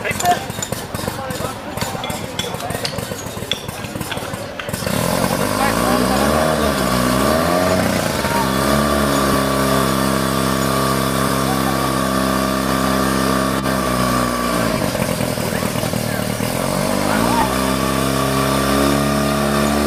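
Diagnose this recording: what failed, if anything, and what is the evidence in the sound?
Lost LE Audio frames on the Bluetooth link: the LC3 decoder filled 7.5 to 22.5 ms gaps at 1.98, 9.32, 11.28, 14.77 and 17.41 s with brief noisy smears of reused spectrum.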